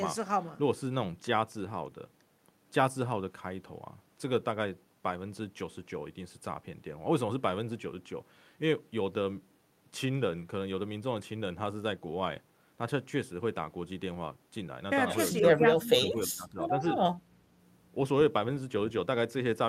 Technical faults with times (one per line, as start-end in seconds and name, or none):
15.40-16.86 speech suppressed in double talk
17.14-17.38 background gated by the echo canceller